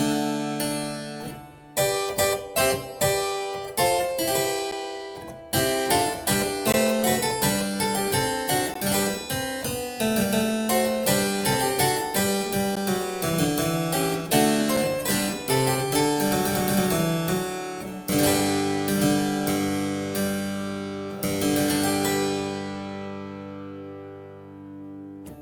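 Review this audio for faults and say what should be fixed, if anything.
Gaps between stream segments cut the sound at 4.71, 6.72, 8.74, 12.76 and 14.77 s. Each is a hard-edged hole of about 4 to 17 ms, and the spacing follows a 2-second segment grid. The timestamps of adjacent segments don't quite meet, so the player inserts silence to cover the missing time. Unlike a dropout, nothing is removed. The sound resumes intact and slightly later, adding time rather than skipping any. To fix it, set each segment's start timestamp to the previous segment's exact end when packaging.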